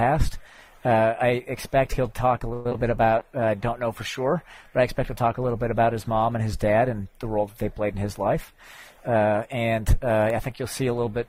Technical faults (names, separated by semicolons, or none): repeated packet loss (robotic sound); call bitrate drop; jitter buffer speed-up